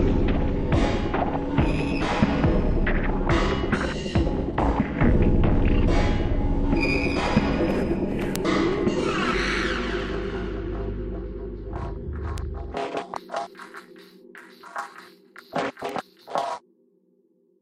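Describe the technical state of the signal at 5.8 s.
At 5.8 s the audio is intact, with no fault to be heard at that moment.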